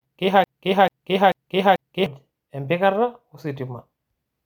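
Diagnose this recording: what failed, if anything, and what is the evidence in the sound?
Broken-record loop, 0.44 to 2.06 s: a 440 ms fragment repeats four times, identical blocks on waveform and spectrogram; likely a stalled playback buffer.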